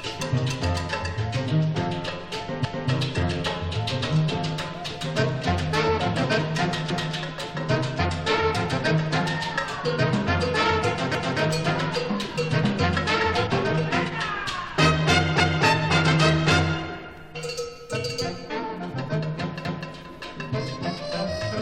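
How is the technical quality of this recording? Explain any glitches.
The recording has one glitch near the end. Overlapping chunks occur from 19.65 to 19.9 s. Here a new block of audio starts before the previous one finished, so the final 250 ms of one block plays again at the start of the next. The spacing of the joins fits 4-second chunks. You hear a brief stutter, a quarter-second of sound repeated back to back.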